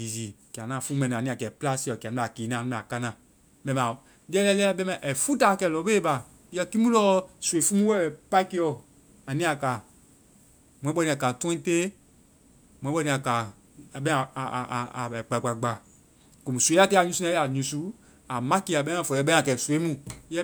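Listening closely to the speech, nothing stood out as a technical fault at any point.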